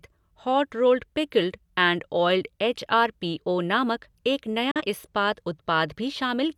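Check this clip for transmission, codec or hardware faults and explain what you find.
One transmission fault is present in the speech: a digital broadcast dropout from 4.71 to 4.82 s. The receiver stopped getting decodable frames and muted its output until valid data resumed. The sound fades to silence over about 3 ms, leaving a hole roughly 0.1 s long before the speech returns further along. About 43 ms of programme is missing outright, which fits a single lost frame. The missing audio is not concealed or repeated, so that fragment is simply gone.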